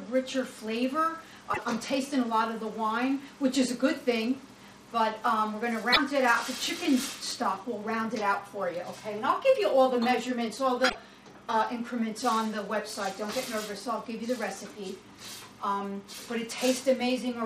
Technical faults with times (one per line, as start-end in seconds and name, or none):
1.53-1.59 broken MP3 bit reservoir
5.92-5.97 broken MP3 bit reservoir
10.88-10.95 broken MP3 bit reservoir